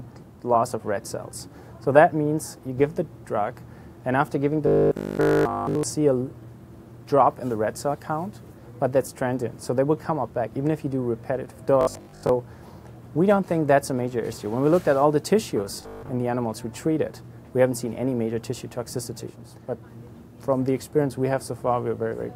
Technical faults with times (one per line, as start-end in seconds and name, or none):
4.67-5.85 robotic sound from repeated short buffers
11.81-12.33 robotic sound from repeated short buffers
15.77-16.09 robotic sound from repeated short buffers